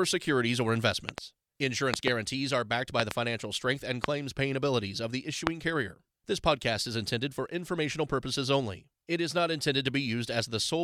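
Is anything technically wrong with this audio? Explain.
Yes. The speech carries loud pops. Double pops fall at 1.09 to 1.20 s, 1.94 to 2.10 s and 3.00 to 3.13 s. Single pops fall at 4.04 to 4.06 s and 5.47 to 5.49 s. The first peaks about 20 dB above the speech, the rest about 25 dB. Each is a sharp, brief thump over the speech, which continues underneath. The likely cause is a sudden voltage step entering the signal, from a plug, switch, static discharge or driver glitch.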